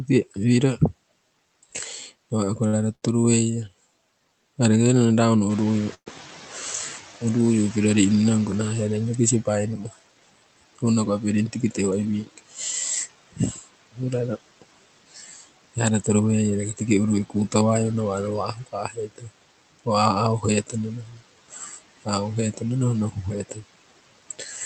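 Speech carried over a call link, where the room noise is pushed down by about 17 dB throughout by noise suppressor artifacts: the residue sinks between phrases and swells under them, unlike the steady noise of the room itself. Short stalls from a late packet at 2.67–2.75 s (56 ms) and 2.95–3.04 s (73 ms) each hold a sound slightly too long, and nothing drops out. The room noise jumps by about 12 dB at about 5.5 s. From 5.49 to 9.03 s the noise suppressor is catching up: the louder noise passes with only about 11 dB of reduction, then sinks over roughly 3.4 s as the estimate adapts. That slow fade separates it from a fixed change in the noise level. Inside that stretch, a call audio freeze at 5.94–6.08 s continues the last sound as it fades for about 119 ms, including 80 ms of silence, most likely from held-up packets draining the jitter buffer. It is longer and emptier than the earlier stalls. 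Speech cut by the noise suppressor runs from 9.46 to 17.54 s, with roughly a second of soft endings and quiet syllables swallowed by up to about 16 dB. It returns from 18.54 s to the end at up to about 18 dB. Unlike the artifacts, this dims the speech itself rather than the gaps. Jitter buffer speed-ups at 11.33–12.13 s (111%, roughly 100 ms removed), 15.77–16.21 s (106%) and 19.86–20.28 s (107%) make delivery hurried at unchanged pitch, which distinguishes them from a sped-up playback. The top end stops near 8 kHz, which fits a wideband Opus setting.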